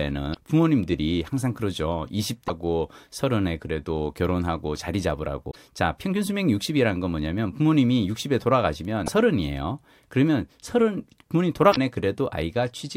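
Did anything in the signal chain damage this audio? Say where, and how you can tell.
Yes. Short glitches cut through the speech at 0.30–0.37, 2.44–2.50, 5.47–5.56, 9.03–9.09 and 11.69–11.77 s, each under a tenth of a second. This is damaged data in a compressed stream: the decoder misreads corrupted frames, loses sync, then recovers at the next valid header.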